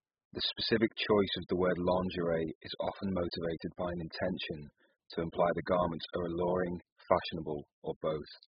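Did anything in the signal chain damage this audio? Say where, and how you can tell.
Yes, AAC compression damage runs throughout the speech, from start to finish, and it happened at the codec stage. Nothing survives above 5 kHz, so sibilants lose their edge and the whole recording sounds dull and muffled. The heavy smearing and watery, warbling texture on sustained sounds point to an encoder that was likely starved of bits, consistent with AAC-LC at around 8 kbps. At that rate it cut the bandwidth and coarsely quantised what remained.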